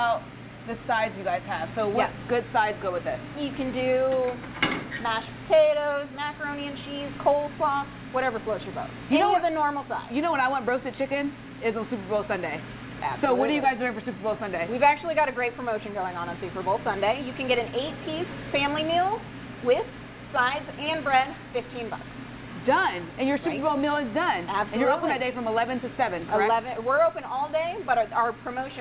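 No technical faults can be heard in this audio.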